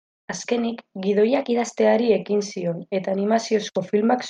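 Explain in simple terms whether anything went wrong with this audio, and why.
Drift correction step, from 1.28 to 1.79 s: for about half a second the speech runs about 6.4% fast and its pitch rises by 108 cents, just over a semitone, before snapping back to normal. This is likely the work of software keeping two device clocks in step. When its buffer drifted too far, it sped up playback in one jump to catch up, shifting speed and pitch together until the buffer was back on target.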